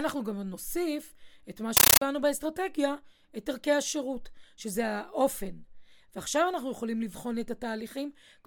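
Speech, and from 1.77 to 2.01 s there's a compressed stream played as audio: undecoded Dolby Digital blasting through as loud static, chattering 31 times a second.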